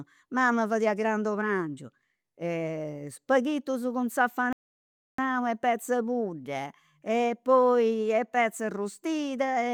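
At 4.53 s, right after "spaghitus cun", the speech halts in a rebuffering stall: playback drained its downloaded audio and waited for more data before continuing. The gap lasts until 5.19 s, adding about 0.66 s, and the sound then picks up precisely where it stopped with "e petz'e pudda e", so nothing is skipped. A waveform shows a flat, empty block, and a spectrogram shows a clean vertical band of silence with matching edges on either side.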